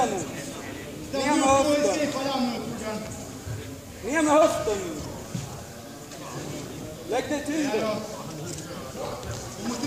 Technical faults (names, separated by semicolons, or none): low bit depth without dither